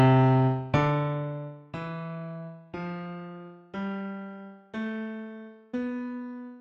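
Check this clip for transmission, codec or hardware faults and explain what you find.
No transmission, codec or hardware faults turn up in this clip.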